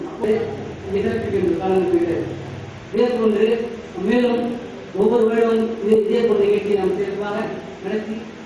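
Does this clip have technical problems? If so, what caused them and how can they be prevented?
Yes. The resampler restarted on every block throughout. The conversion, which points to 48 kHz down to 24 kHz, handled each 20 ms block alone. Each block edge lacked its real neighbouring samples. This leaves a small error there, heard as ticks at 50 Hz whenever sound is present. To prevent it, run one continuous resampler that carries its filter state from block to block.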